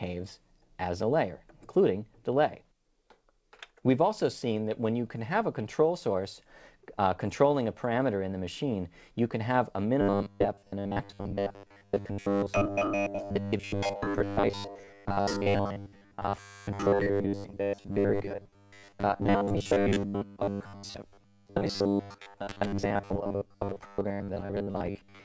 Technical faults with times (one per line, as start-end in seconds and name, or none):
10.01-25.24 robotic sound from repeated short buffers